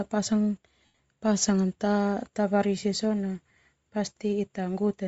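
From start to finish the speech has a breathy, grainy sheen in its upper range, where sibilants and consonant detail turn to hiss rather than sharp edges. This is most likely Bluetooth LC3 compression at a low rate, which fits something like 32 kbps with 7.5 ms frames. The codec drops much of the upper spectrum and fills it with shaped noise. That noise fill separates it from a plain low-pass bandwidth limit, which would sound dull instead of grainy.

Between 0.85 and 0.99 s come lost LE Audio frames. About 112.5 ms of audio is missing, spread across 135 ms, with the longest unbroken gap lasting roughly a tenth of a second. The decoder covers each gap by repeating the last spectrum with scrambled phase, so the speech turns into a noisy smear that fades during the longer run. This is what sets it apart from a hard dropout to silence or from a clicking repeated buffer.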